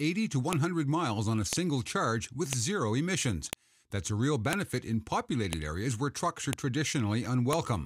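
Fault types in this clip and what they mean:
File header played as audio: sharp clicks at 0.53, 1.53, 2.53, 3.53, 4.53, 5.53, 6.53 and 7.53 s, one every second. The audio seems to have been assembled from one-second WAV pieces that kept their headers when joined, so each piece's few dozen header bytes are read as sample values. That brief burst of unrelated numbers comes out as a loud, very short snap at every seam, regardless of the surrounding sound.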